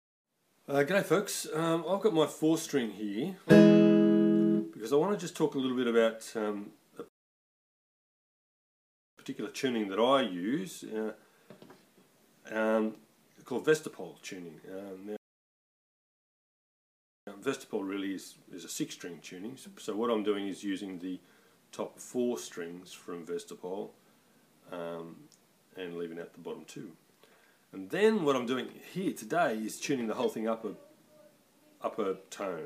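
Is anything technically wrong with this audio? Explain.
Yes. Rebuffering stalls at 7.08 to 9.18 s and 15.17 to 17.27 s: playback ran dry waiting for data, going silent for about 2.1 s each time, then resuming exactly where it stopped.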